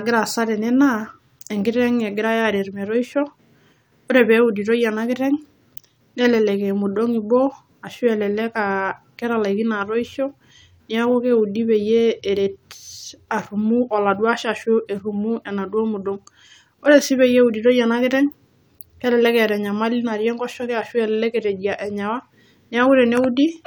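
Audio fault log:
No faults heard: the speech runs without interruption, with no audible defects to log.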